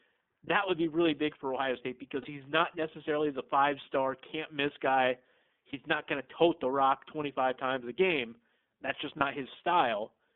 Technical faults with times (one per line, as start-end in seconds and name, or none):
0.00-10.35 iLBC codec
2.22-2.26 lost iLBC frames
5.70-5.74 lost iLBC frames
9.17-9.22 lost iLBC frames